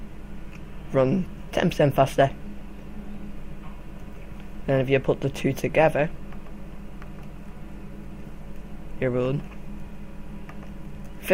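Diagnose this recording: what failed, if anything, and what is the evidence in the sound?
Nothing failed: no stage in the chain, from analogue wiring through conversion, buffering, codec, network and storage to playback, leaves any audible evidence of a fault in this recording.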